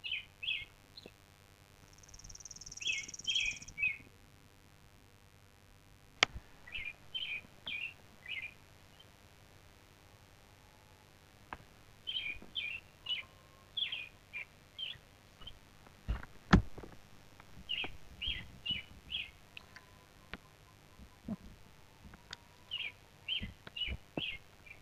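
Switching spikes from the 50 Hz mains get into the signal path and stay there for the whole clip, producing a mains buzz. Its harmonics stretch up into the kilohertz range, giving a steady, raspy buzz sitting roughly 25 dB below the main sound.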